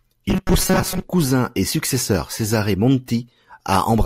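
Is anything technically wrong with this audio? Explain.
Yes. Robotic sound from repeated short buffers runs from 0.30 to 1.04 s: the speech collapses into a rigid, metallic buzz pitched at about 188 Hz that still loosely tracks the words. The likely cause is audio arriving too slowly, so playback keeps looping the last fragment while fresh audio is skipped, with roughly half the signal in this stretch being repeats. A 188 Hz buzz fits a buffer of about 5.3 ms being replayed back to back.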